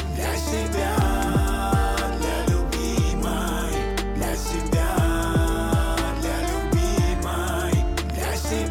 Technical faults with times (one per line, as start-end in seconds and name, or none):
1.02-1.24 loud pop
8.10-8.12 loud pop